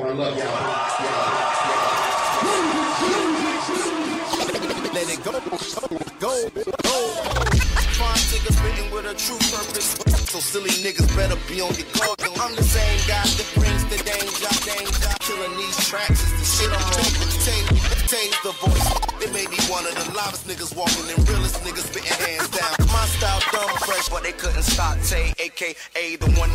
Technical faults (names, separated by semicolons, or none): GSM phone buzz